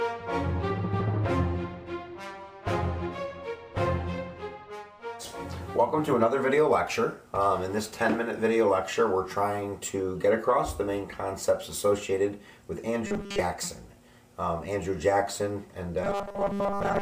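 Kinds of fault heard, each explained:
Robotic sound from repeated short buffers: The sound turns into a rigid, metallic buzz from 13.07 to 13.41 s and again from 16.04 s to the end. The buzz sits at 200 Hz, which fits a fragment about 5 ms long being played over and over. This likely happens because fresh audio arrives too late, so the last piece is repeated to fill the gap. Most of each stretch is repeats, and the skipped audio is lost.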